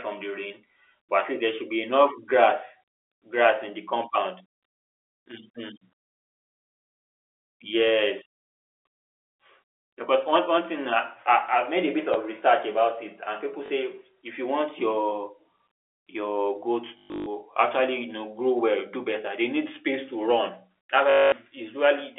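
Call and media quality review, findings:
Packet loss with last packet repeated: a small blip at 12.14–12.16 s (after "made a bit"), robotic stutters at 13.66–13.70 s, 16.98–17.26 s and 21.10–21.32 s. Receiver concealment replays the last packet. The 50 Hz buzz, rather than silent gaps, points to 20 ms packets.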